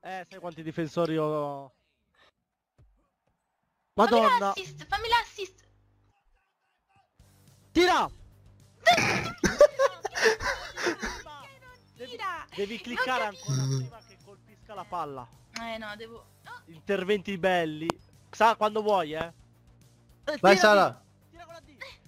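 Two loud pops land close together near the end, the first from 17.90 to 17.92 s and the second from 19.21 to 19.23 s. Each is a single sharp click-thump of about 20 ms that jumps well above the surrounding sound, the first somewhat harder than the second, while the audio carries on underneath. The likely culprit is a brief voltage spike, from a plug, switch, static or a driver glitch, punched straight into the signal path.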